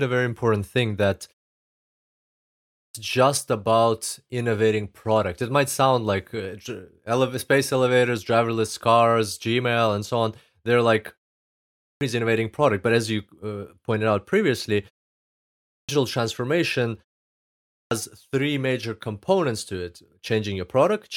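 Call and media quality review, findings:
Clipped start after a pause: speech resumes abruptly with onsets missing, about 0.52 to 0.6 s lost at 2.40, 11.45 (before "innovating product but as"), 15.29 (after "uh pointed out previously") and 17.39 s (before "three major components to"). Output device sleeping during pauses, waking late.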